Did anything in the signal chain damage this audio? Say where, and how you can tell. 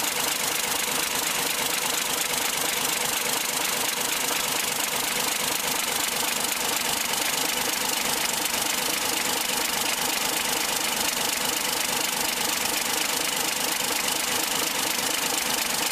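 No, nothing in the chain audibly damaged this audio.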